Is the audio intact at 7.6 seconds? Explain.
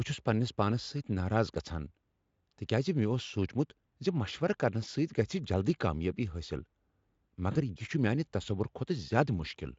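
No. VoIP packet loss concealed by the speech codec covers 7.51 to 7.62 s, with about 40 ms of audio missing, which fits two lost 20 ms frames. The decoder filled the gap by extending its last pitch and filter shape while lowering the gain, so the speech smears into a fading buzzy tone or coloured noise. Because each decoded frame builds on the one before, the sound stays weak and distorted until about 7.62 s, after the packets resume.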